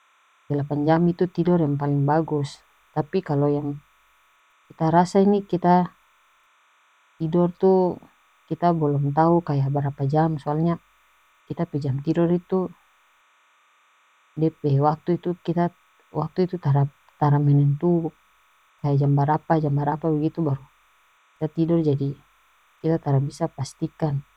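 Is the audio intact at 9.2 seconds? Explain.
No. At 9.2 seconds there is timecode bleed, and it runs for the whole clip. Linear timecode from a neighbouring track or cable has leaked into the speech. The code is a square wave that flips between two pitches, here about 1 kHz and 2 kHz. Its rhythm fits 30-frame timecode. It sits roughly 40 dB below the speech. It comes through as a faint, steady chirping warble behind the speech.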